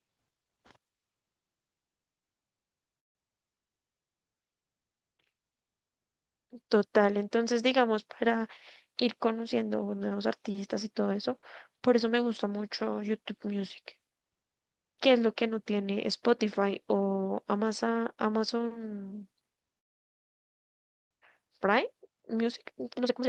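At 2.99 s the audio halts for about 0.29 s, then again from 19.78 to 21.13 s. These are call audio freezes, likely from packets held up in transit until the jitter buffer ran dry. Each begins with the last sound briefly prolonged and then falls silent, for about 150 ms and 1.32 s. Unlike a dropout, the speech resumes exactly where it stopped, so the pause is inserted and nothing is lost.

From 21.92 s to the end, a jitter buffer speed-up shortens the backlog by trimming pitch-period-sized slices, around a third of a second in total. The speech runs about 121% fast and sounds hurried, yet its pitch stays put, which separates it from simply playing the audio faster.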